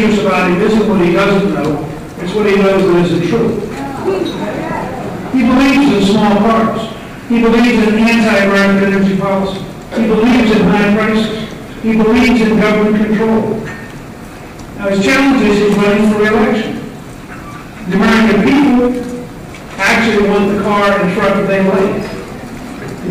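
Hard clipping runs throughout the sound: it was driven roughly 17 dB past full scale, flattening peaks on about a seventh of samples and producing harsh fuzz on every loud sound.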